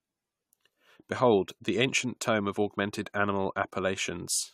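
From start to finish the speech carries generation loss: a swirly, hollow smear with softened consonant attacks and nothing above 18.6 kHz. It likely comes from around four passes through AAC-LC at roughly 96 kbit/s, each re-quantising on a shifted frame grid.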